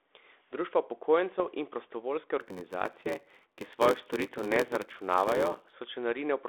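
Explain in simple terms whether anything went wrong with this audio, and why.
Two things went wrong.

At about 1.36 to 1.47 s, just before "in prostovoljske", there are bit errors on an ADPCM link. A few bits of the compressed signal were flipped. This kind of compression stores each sample as a small change from a prediction, so one wrong bit throws off the decoder's guesses for a moment. You hear a pop and a short rough burst with a jump in loudness. Unlike a simple click, it smears on for a few milliseconds before the decoder settles back down.

From 2.40 to 5.73 s, right after "in prostovoljske", there is a block size mismatch (padded). One stage hands over audio in chunks smaller than the next stage expects, which fits a reader taking 512-sample blocks, and the shortfall in each chunk is filled with silence. Those tiny silent gaps repeat about 94 times a second and make a steady buzz. 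The speech also runs about 14% slow. Unlike a slowed-down tape, the voice keeps its normal timbre, because nothing is stretched. Silence is just added in between.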